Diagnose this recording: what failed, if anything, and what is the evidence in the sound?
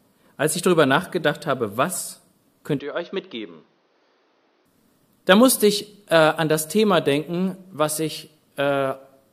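Device-level input switch, likely to a poorer device: from 2.79 to 4.66 s the sound loses everything above 6.4 kHz, drops about 5 dB, and picks up faint background noise.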